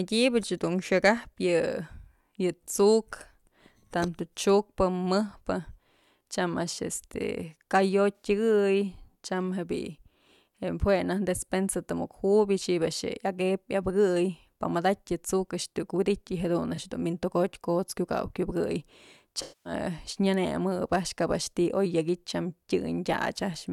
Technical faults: AAC frame loss with concealment

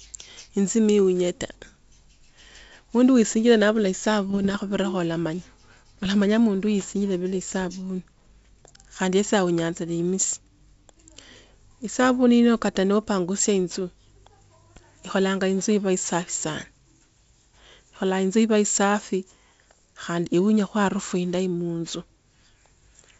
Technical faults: bit errors on an ADPCM link

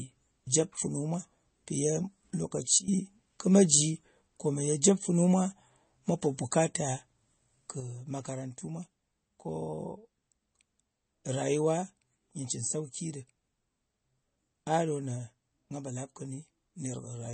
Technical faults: MP3 compression; sudden gain jump

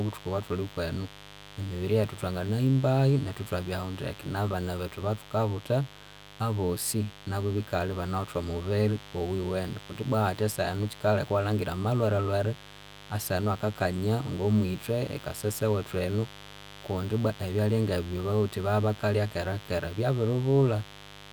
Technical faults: mains buzz

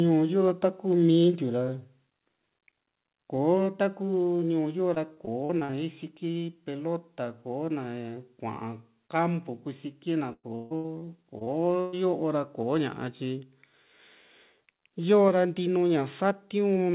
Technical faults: microphone volume stepped down; repeated packet loss (robotic sound)

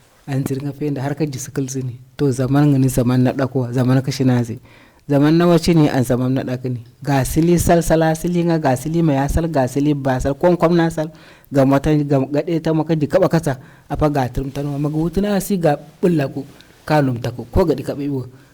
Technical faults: hard clipping; corrupt frame decoded

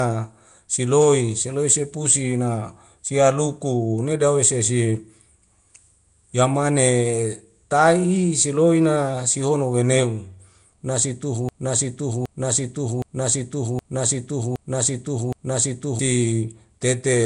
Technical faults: Nellymoser compression; broken-record loop

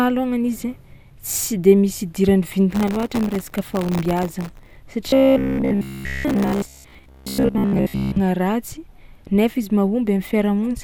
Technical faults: processor overload crackle; robotic sound from repeated short buffers

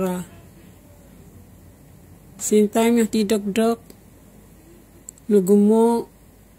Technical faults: none

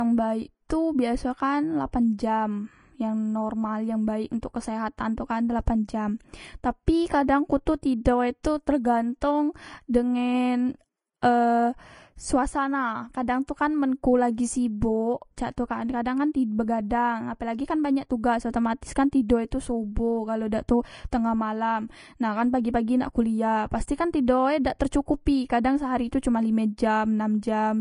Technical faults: Vorbis compression; pre-echo

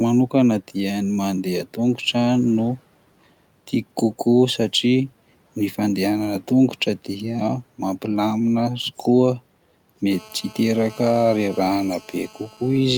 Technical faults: GSM phone buzz

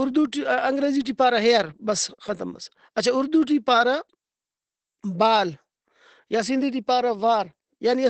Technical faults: Opus compression

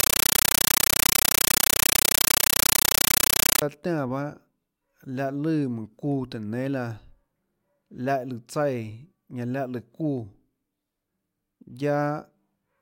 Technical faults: compressed stream played as audio

